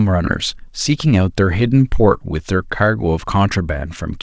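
No technical faults are audible.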